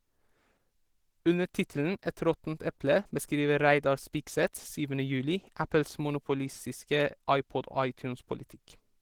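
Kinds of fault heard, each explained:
Opus compression: The speech comes across hoarse, grainy and somewhat muffled throughout, while still reaching up to about 20.3 kHz. That likely comes from Opus at a low bitrate, roughly 16 kbps, running in its hybrid speech mode, which starves the bands of detail.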